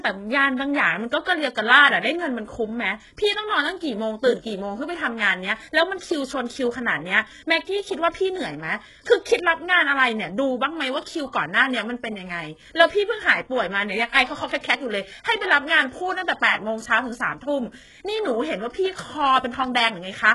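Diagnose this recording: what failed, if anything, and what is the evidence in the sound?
The failure is at the codec stage. Nothing reaches above 11.5 kHz, and the treble that remains sounds synthetic. Sibilants come out gritty and metallic. The likely cause is heavy HE-AAC compression, at a rate that fits roughly 12 kbps. Band replication copies lower bands upward, so the rebuilt harmonics don't line up.

Pre-echo appears at 1.25 s, also from the codec. A short hiss of about 17 ms runs just ahead of a sharp speech onset, and the attack sounds softened. The transform block spreads its noise evenly across the whole block, so the quiet moment before the loud attack fills with noise.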